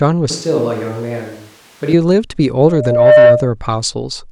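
Speech that, from 0.30 to 1.93 s, turns suddenly roomy and hollow, with thinner bass, a level roughly 5 dB lower and background noise roughly 25 dB below the speech. The abrupt change, rather than a gradual drift, points to a likely switch to a distant microphone. From 2.66 to 3.53 s a loudspeaker feedback squeal appears: a single 605 Hz tone swells over about half a second to roughly 10 dB above the signal. Its self-building growth distinguishes it from a steady added hum.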